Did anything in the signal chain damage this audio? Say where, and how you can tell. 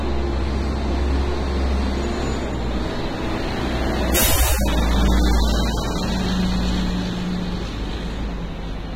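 Yes. Throughout, the audio is dulled, with nothing above 15.9 kHz and a smeared, warbling texture, likely AAC compression at the codec stage, at a low bitrate around 24 kbps. A plain low-pass filter wouldn't cause that swirling.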